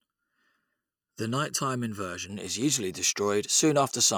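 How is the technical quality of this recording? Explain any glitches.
The opening of the recording has one fault. Channel delay (comb filtering), 0.0 to 2.3 s: one channel lags the other by under a millisecond before mono summing, cutting notches from around 700 Hz, so the speech sounds hollow and phasey until "is usually".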